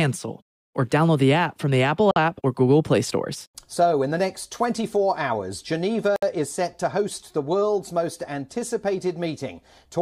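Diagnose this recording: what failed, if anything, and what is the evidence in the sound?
The codec stage failed, leaving a gap at a join of encoded pieces. Silence opens at 2.11 s for about 51 ms and at 6.16 s for about 64 ms, four seconds apart, with smeared edges. Separately encoded segments were concatenated with encoder delay and final-frame padding left untrimmed.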